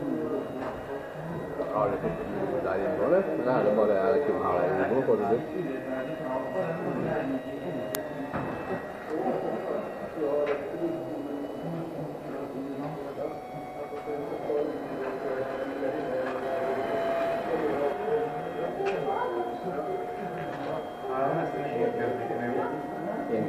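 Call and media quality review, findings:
Uninitialised buffer at 7.95 s: one audio block played out before any samples were written, leftover memory read as audio. Heard as a very brief, loud crack, roughly 0.67 ms long, which fits a 32-sample buffer.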